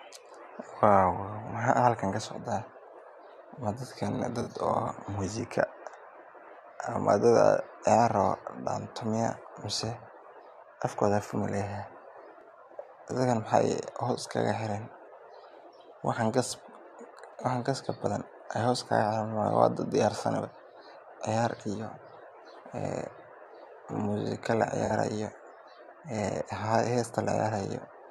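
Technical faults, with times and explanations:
4.42–4.48 s and 24.85–24.91 s, corrupt frame concealed: two brief concealed spots of about 60 ms each. The decoder caught damaged AAC frames and papered over them rather than playing out garbage. Two frames were hit at the first spot and three at the second.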